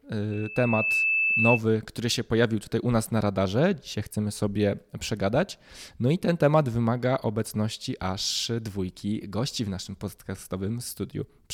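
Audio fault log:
0.31–1.61 s, loudspeaker feedback squeal: a 2.6 kHz tone swells over under a second to a few dB above the speech, stopping before "który się pojawił tutaj", unlike a steady whistle.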